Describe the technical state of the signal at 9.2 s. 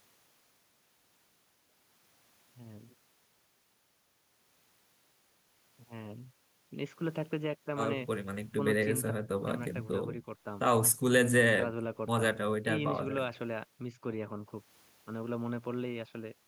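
At 9.2 s the input feed was likely lost and silence was written: an audio dropout to silence from 9.11 to 9.47 s, about 0.36 s of total silence without room tone.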